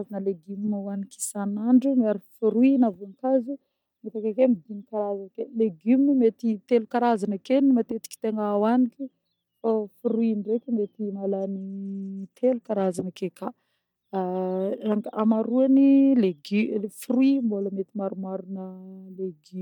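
From 10.70 to 13.06 s the speech turns dull, losing its treble, and a gritty, grainy noise rides along with it before clarity returns. This is a Bluetooth SBC bit pool drop: a congested wireless link forced the encoder to spend fewer bits, leaving the highest sub-bands starved and the remainder coarsely quantised. The degree of dulling fits the bit pool falling from 28 to 13, around 102 kbps, until the link recovered.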